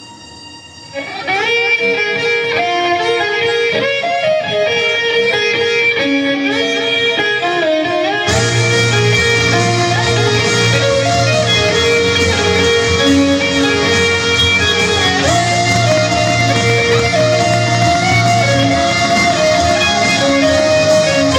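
There's hard clipping running through the whole clip. The signal is being pushed about 6 dB past what the chain can pass, so the peaks get sheared flat, and those squared-off tops throw harmonics high up the spectrum. Only around one percent of the samples actually hit the ceiling, so you hear a crackly edge on the loudest moments rather than constant fuzz.

On top of that, a train of clicks comes in from 15.76 s to 19.72 s: roughly thirty ticks at an uneven pace, averaging about 7.8 per second, each sticking out about 10 dB above the surrounding sound. They share a similar shape and keep going regardless of what the audio is doing. That pattern most likely comes from interference from nearby gear or a faulty connection or power supply injecting pulses into the signal.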